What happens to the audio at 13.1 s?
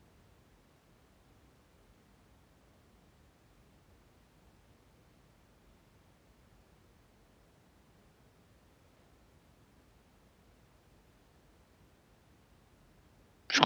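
At 13.1 s the speech runs on intact, with no audible fault at that moment.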